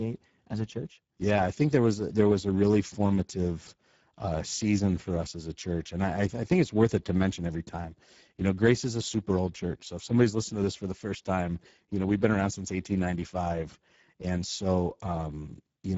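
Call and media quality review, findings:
Speex codec, throughout the clip. Speech hoarse and noisy, codec damage plainly audible. Low-rate CELP encoding starves the excitation of bits, so voicing turns grainy. Nothing above 7.7 kHz, which points to wideband mode. The top band above 4 kHz is a shaped, noise-like fill rather than real detail. The damage fits a setting around 10 kbps.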